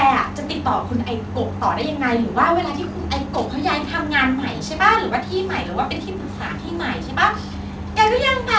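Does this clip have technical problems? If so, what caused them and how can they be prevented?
No, there's nothing wrong with this one; it's speech that came through a call connection, and the top end simply stops at about 8 kHz, which is just what you'd expect from a wideband call codec like G.722 doing its normal job.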